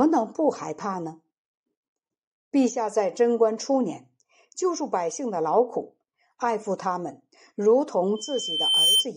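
Speech clip with loudspeaker feedback squeal from 8.15 s to 9.07 s: a 3.1 kHz tone swells over most of a second to about 5 dB above the speech, as the microphone re-amplifies its own loudspeaker with loop gain exceeding one at that frequency.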